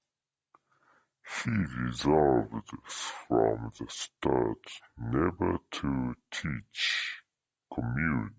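Speech with a wrong sample rate throughout: it plays at two-thirds speed and about 7 semitones low, which fits 24 kHz material played back at 16 kHz.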